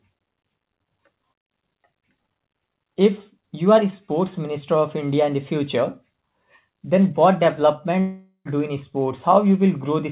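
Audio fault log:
8.00–8.48 s, long network dropout: The sound stops arriving and turns into a smeared buzz that fades over about 0.45 s. This is the receiver stretching the last sound it had to cover the gap. The buzz gives way to near silence for about 80 ms. The audio returns at "do in" with about 0.45 s missing, and nothing of that span is replayed. This is likely a network dropout, heard through the narrowband call path with nothing above 4 kHz.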